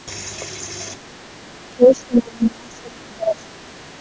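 From 0.99 to 1.23 s the speech dips by about 15 dB. From 1.7 to 3.56 s it drops deeper, about 30 dB. A brief dip follows at 3.82 to 3.9 s. The likely cause is speech suppressed in double talk. The echo canceller mistook the talker for echo and turned it down.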